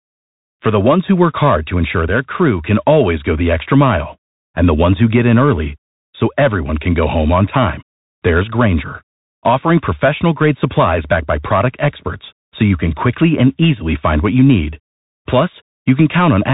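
This speech clip has passed through the Bluetooth CVSD headset codec for its whole length, a one-bit adaptive delta coder whose sound fits a 64 kbps link. Nothing above 3.8 kHz survives, fast loud high sounds outrun the step size and distort, s sounds turn scratchy, and a granular hiss sits beneath the speech.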